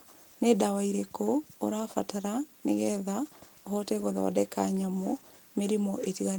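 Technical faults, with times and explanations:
No technical faults found.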